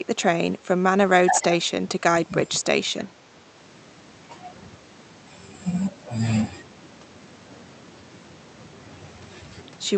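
Speech carried over an Opus call path, band-limited to around 8 kHz, with two stretches where the talker is pushed down: 1.59 to 2.65 s, dropping as much as about 15 dB for roughly 0.7 s in total, and 2.99 to 3.54 s, a shallower dip of about 5 dB. The pattern is likely speech suppressed in double talk, the echo canceller failing to separate the near-end talker from the overlapping far-end echo and attenuating the near-end talker along with it.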